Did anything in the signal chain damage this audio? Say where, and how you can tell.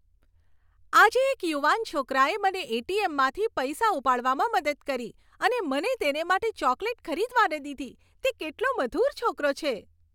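No, nothing I can hear in this speech recording points to damage anywhere along the signal chain.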